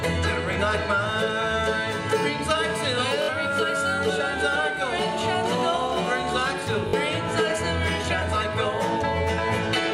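The audio has three repeated buffer stutters, at 0.53–0.56 s, 3.22–3.29 s and 6.89–6.93 s. Each time a 21.33 ms segment replays one, three and two extra times with hard joins. This fits a 1024-sample buffer arriving late, and it costs roughly 20, 70 and 40 ms of audio.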